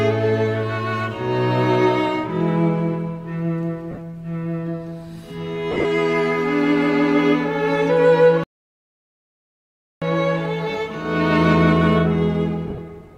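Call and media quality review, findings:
Lost LE Audio frames at 3.91–3.98 s, 5.71–5.85 s and 12.67–12.78 s: brief grainy smears where sound should continue. Losses are scattered over 60, 135 and 105 ms, about 45, 98 and 45 ms missing, consistent with 7.5 ms LC3 frames. LC3 concealment repeats the last spectrum with random signs, and the longest gap near 5.8 s starts to fade.

Playback stall at 8.44–10.02 s: output drops to silence for about 1.6 s mid-flow, then resumes. Likely cause is the player's buffer running dry or its audio thread being blocked.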